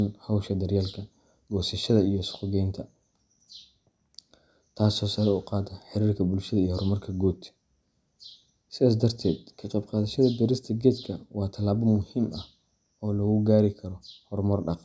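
No faults can be heard anywhere in this recording.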